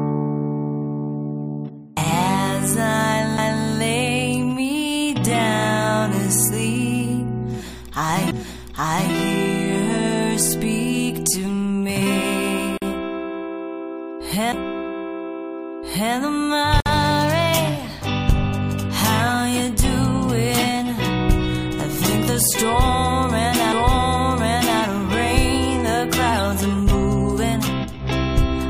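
At 3.37 s the first CD skip occurs: a short tick and a brief mute of under a hundredth of a second, after which the sound resumes from a different point. A knock or disc flaw has sent the laser to another turn of the spiral. On a waveform each skip is a tiny flat notch with a discontinuity at its far edge. On a spectrogram it is a thin vertical broadband line where the content abruptly shifts. The same fault returns at 8.31 s, with a mute of roughly ten milliseconds, and again at 14.52 s.

Between 12.78 and 12.82 s a gap at a join of encoded pieces opens: 44 ms of silence cut into otherwise continuous sound, which then carries on exactly where it stopped. Two separately encoded segments were butted together with the encoder's start-up delay and final-frame padding left in place. A second join gap, 57 ms long, runs from 16.80 to 16.86 s. Each shows as a flat stretch in the waveform and a clean vertical band on the spectrogram, with edges slightly blurred by the codec.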